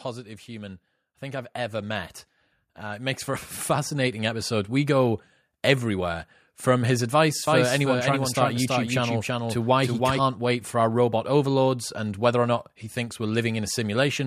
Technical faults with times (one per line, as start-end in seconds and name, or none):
0.45-4.79 automatic gain rising
7.47-10.19 doubled audio track